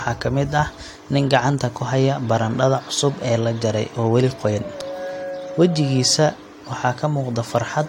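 No technical faults are audible.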